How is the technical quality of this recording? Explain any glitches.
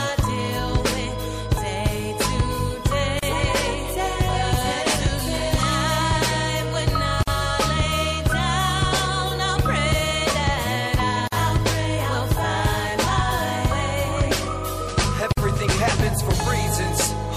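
The quality is poor. Two problems stand out.

Throughout, the sound is watery and swirly, with smeared attacks and a dulled top end. The likely cause is MP3 compression at a low bitrate, near 64 kbps. Short of bits, the encoder drops the treble and switches weak frequency lines on and off.

Four brief dropouts break continuous sound at 3.19, 7.23, 11.28 and 15.33 s, about 4 s apart. The first lasts about 35 ms, the rest about 49 ms. These are gaps at joins of encoded pieces. Each piece kept its encoder's start delay and end padding, so silence opens with smeared edges before the sound resumes.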